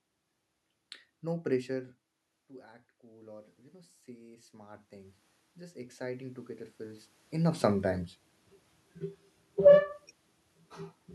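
Speech in which the level drops and then climbs back. The voice falls away at around one and a half seconds, as if the talker leaned back from the microphone, and then from 3.0 s to 7.1 s the voice and the room noise behind it swell together over about four seconds. That slow joint rise is automatic gain rising. The input fell by about 18 dB, and the gain control answered by stepping its gain up about 12 dB, lifting the background along with the voice. Around seven seconds the talker comes closer again, so the raised gain now meets a stronger input. Between 9.51 s and 9.82 s the sound is briefly too loud and then sinks, again with its background. That is automatic gain falling: the control hears the louder input and pulls its gain down by about 3 dB over roughly a third of a second.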